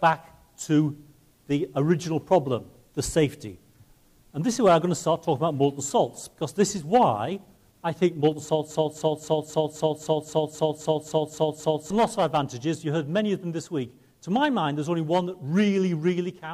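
At 8.71 s a broken-record loop begins and runs to 11.90 s: a fragment of about 0.26 s repeats exactly, back to back, 12 times. The likely cause is a stalled player, encoder or stream resending its last held fragment, so the audio for that stretch is lost.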